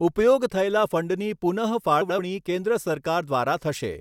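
At 2.01 s to 2.19 s, frames arrive out of order. Two neighbouring blocks of about 85 ms each were swapped before decoding, which fits runs of four frames. The speech there plays with its halves exchanged. It sounds like a garbled flutter.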